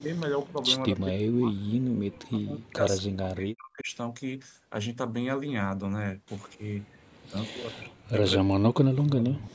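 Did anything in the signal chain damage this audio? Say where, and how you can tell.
Yes. Speech suppressed in double talk at 0–0.18, 0.47–0.62, 0.88–1.56, 1.94–3.9, 6.55–7.01, 7.28–8.17 and 8.37–9.54 s: the speech dips or cuts out, at worst by about 40 dB. This is likely the call's echo canceller turning the talker down while the far side also spoke.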